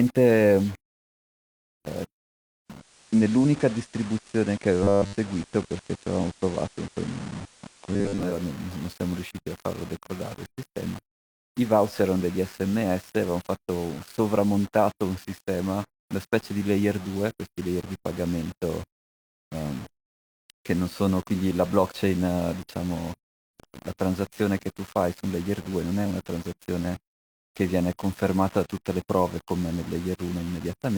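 From start to finish, the speech is grainy. The likely cause is low bit depth without dither: about 6 bits, rounded. The error tracks the signal, sitting around 20 dB below it. Quiet passages turn gritty, and the grit shifts with the sound.

At 2.65 s, digital radio blending to analogue begins. The receiver cross-fades over 339 ms to the FM signal. Hiss rises, roughly 30 dB below the speech, and the level shifts by about 2 dB. It blends back at 8.43 s.

Within that stretch, robotic sound from repeated short buffers appears twice, from 4.83 to 5.17 s and from 7.93 to 8.23 s. New audio likely arrives too seldom, so 10 ms slices repeat for most of each span. This imposes a rigid, metallic 100 Hz buzz.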